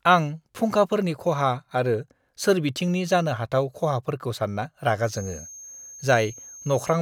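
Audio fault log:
4.99–7.02 s, feedback whistle: the loop from loudspeaker back into the microphone likely sits right at the edge of feedback, so one frequency keeps recirculating without running away. A thin, one-pitch whistle near 6.4 kHz, swelling and fading slowly, sits behind the speech, roughly 20 dB below it, until the end.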